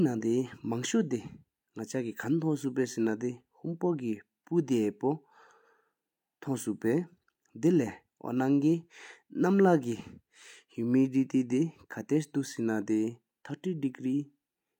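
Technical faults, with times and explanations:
Nothing technical stands out here; the speech comes across without any fault worth flagging.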